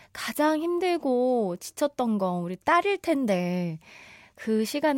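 No technical faults can be heard anywhere in the speech: the signal runs continuously, with steady level and nothing in its path disturbing the sound.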